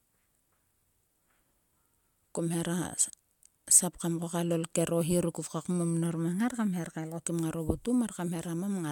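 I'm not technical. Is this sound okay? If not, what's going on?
Yes, this one's fine: nothing here jumps out as a problem, so there's nothing you need to worry about.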